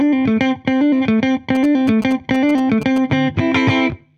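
From 1.55 to 2.98 s there's GSM signalling interference: a nearby phone's radio bursts get rectified, giving galloping ticks and 217 Hz buzzing, roughly 15 dB under the signal.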